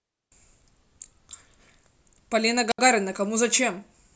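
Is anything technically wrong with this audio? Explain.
Yes. A wireless microphone squelch dropout occurs at 2.70 to 2.79 s: the FM radio signal fades, the receiver's squelch mutes its output, and after a short rise of hiss the speech drops into about 70 ms of near silence before returning.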